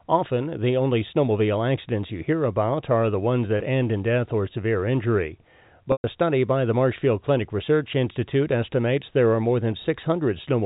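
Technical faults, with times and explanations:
3.58–3.60 s, packet loss with pitch repetition: After "about are the ones", a 20 ms gap is bridged by repeating the last pitch period. It sounds like a brief, slightly buzzy hold before "end in death or" resumes. This fits one lost packet.
5.92–6.04 s, packet loss with pitch repetition: After "death or severe injury", 120 ms goes missing, which fits several packets in a row. The repeated period fades into silence. Speech then cross-fades back in at "study by the".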